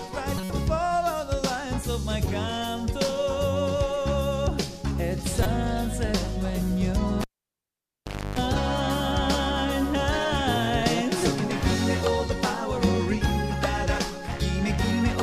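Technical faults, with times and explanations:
0.37–0.50 s and 5.43–5.46 s, corrupt frame decoded: damaged compressed frames played anyway put energy at wrong frequencies, giving short chirpy bursts lasting a few frames, not single clicks.
7.21–8.39 s, cable pulled and plugged in: a pop, about 1.13 s of near silence including 0.30 s of 50 Hz mains buzz, then a second pop. The buzz and pops distinguish it from a plain dropout.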